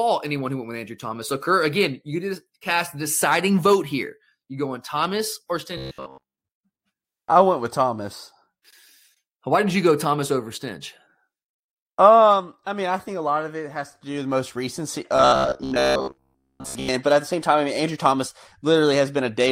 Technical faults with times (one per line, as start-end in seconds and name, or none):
5.77-6.36 robotic sound from repeated short buffers
15.16-16.88 robotic sound from repeated short buffers